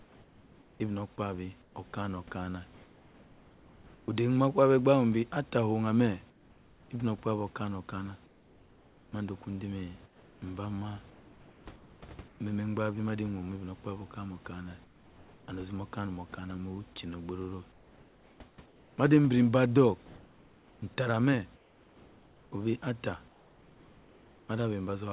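The sender likely stopped transmitting during pauses, so comfort noise in place of the background fills 0.0–4.08, 6.3–6.9, 8.26–12.4, 14.84–15.48, 17.72–18.98 and 21.56–24.48 s. The room noise becomes a flat, featureless hiss, about 4 to 5 dB quieter in the short gaps.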